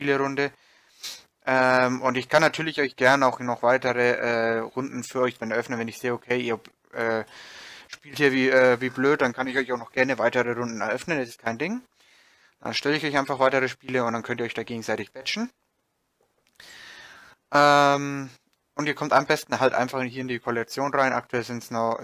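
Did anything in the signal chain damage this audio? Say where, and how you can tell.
No, nothing in the chain audibly damaged this audio, with no stage showing evidence of a fault anywhere in the clip.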